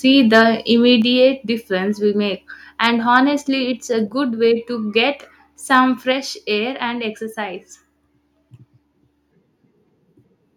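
At 0.34 to 0.42 s the microphone input was likely set too high, driving peaks about 3 dB past the converter's ceiling. This is microphone overload, and its flattened tops, a few percent of the samples in that stretch, give the loudest moment a harsh, crackly edge. At 1.02 s the call software likely reacted by stepping the microphone volume down, cutting the input by about 5 dB in one move, so the voice and background both drop abruptly in level.

At 2.84 to 2.86 s a second, shorter microphone overload likely pushed peaks about 2 dB over the limit. Only a small fraction of samples are clipped, heard as a brief crackling bite. At 6.12 s another microphone volume step-down, likely triggered by the software, lowers the input by about 4 dB. The whole sound becomes quieter at once, with no fade between the two levels.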